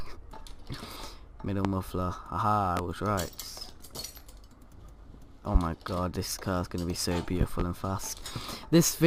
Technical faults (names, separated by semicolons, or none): loud pop